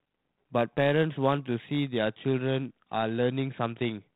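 From the start to 1.98 s, sample clock jitter: the converter's clock wanders by around a microsecond, so steep, bright parts of the speech gain a fine roughness some 45 dB down. Unlike steady background hiss, it swells with sibilants and loud passages and disappears in pauses.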